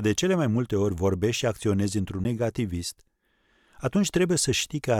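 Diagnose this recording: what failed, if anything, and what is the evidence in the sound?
A CD skip at the playback stage: the laser pickup lost its track and landed on a different turn of the disc's spiral. At 2.24 s the speech drops out for about 10 ms with a tick, then resumes from a different point, a sudden discontinuity.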